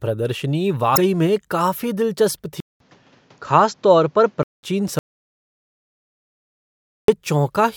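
At 0.93 to 0.98 s the speech is hit by damaged data in a compressed stream: a brief disruption lasting about 50 ms, where corrupted frames are misread by the decoder, which loses sync and has to hunt for the next valid frame header. The result is a short blip rather than clean audio, a small disruption near the start of the clip.

From 2.60 s the sound changes character, most likely because the input switched to a poorer device. A silence of about 200 ms marks the changeover, after which nothing is left above 7.6 kHz, so the speech turns duller and narrower. The level stays about the same, while a new noise floor appears roughly 35 dB below the signal. The original, fuller tone returns at 4.63 s.

At 4.99 s the audio cuts to complete silence, with no room tone at all, and only resumes at 7.08 s. This dropout to silence lasts about 2.09 s, likely because the input was lost while the recorder kept writing silence. 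Whatever was spoken in that stretch is gone entirely, with a hard cut in and out of silence.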